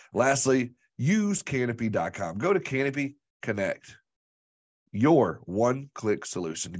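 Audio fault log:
No audible faults detected.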